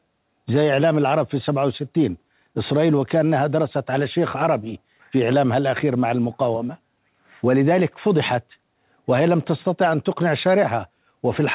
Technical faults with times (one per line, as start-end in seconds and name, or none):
none